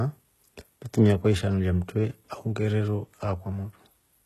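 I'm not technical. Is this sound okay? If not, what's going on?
No. The speech was most likely squeezed through HE-AAC compression, a space-saving format that stores only the lower part of the sound in full and fakes the treble by copying lower tones upward. Throughout the clip the copied treble doesn't quite match the real voice, so the s sounds come out gritty, metallic or lispy, and nothing at all is present above about 12.3 kHz.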